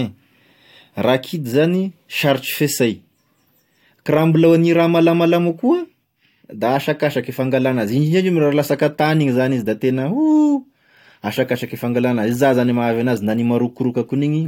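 Nothing in this speech recording stands out as a technical fault, so there's nothing here to flag.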